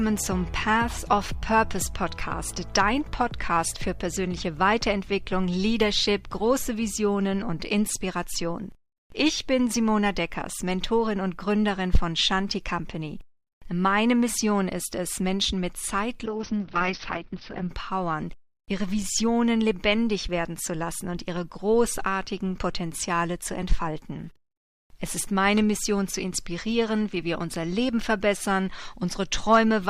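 Around 16.27 to 17.75 s there's a call bitrate drop: the audio goes rough and muffled, top end cut to about 6 kHz, consistent with a drop from roughly 64 to 7 kbps.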